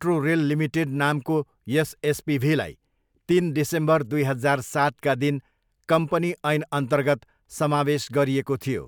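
No technical faults are audible.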